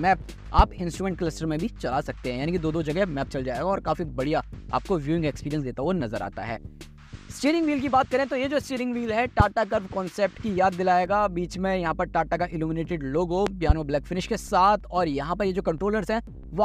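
Loud pops hit at 0.59 s and 9.40 s, and a double pop lands between 13.47 and 13.73 s. Each is a sharp thump standing roughly 20 dB above the sound, which carries on beneath. That's likely a voltage spike from a plug, switch or static.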